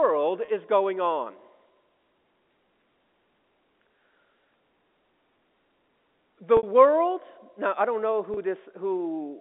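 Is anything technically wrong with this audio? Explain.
Yes. Three brief buzzy holds occur where the voice sustains one repeated pitch cycle, then fades: packet loss with pitch repetition. The receiver loops the last pitch period to cover each missing stretch.

At 0.45 to 0.48 s, just before "is going on", a 30 ms gap, consistent with one lost packet, sounds like a slightly held note. At 6.57 to 6.63 s, a 60 ms gap, likely two packets, gives a longer, fading buzz. At 8.34 to 8.37 s, right after "now I don't know", another 30 ms hold. The telephone-band G.711 coding beneath it carries no fault.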